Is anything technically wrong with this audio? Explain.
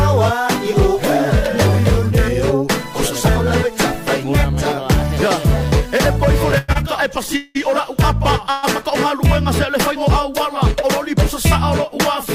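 Yes, there are two delivery faults.

From 6.51 to 7.57 s there are repeated stalls (stutter). Packets arrived late five times, and the receiver ran out of audio each time. It filled the gaps by extending the last sound, about 335 ms in total, with the longest gap 187 ms. That is roughly a third of the span, and nothing is lost. It sounds dragging and hiccupping. On a spectrogram you would see five smeared, horizontally stretched patches. The waveform shows repeated flat-envelope stretches that fade in the longer ones.

From 8.50 to 8.65 s there is a call audio freeze. The sound hangs for about 124 ms as a held buzz that never drops to silence, then resumes where it stopped. The likely cause is packets held up in transit long enough to empty the jitter buffer, which shifted the timing later by the same 124 ms. A spectrogram shows one short block of frozen, streaked harmonics. The waveform shows a brief repetitive stretch before normal detail returns.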